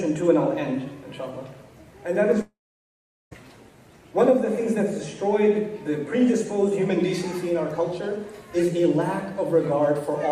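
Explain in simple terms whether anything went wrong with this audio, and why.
From 2.41 s to 3.33 s the audio breaks off: the last sound carries on briefly as a fading buzz, then about 0.8 s of silence. This is likely a long network dropout. Unlike a brief glitch, the gap is long and the audio resumes further on, skipping the lost part.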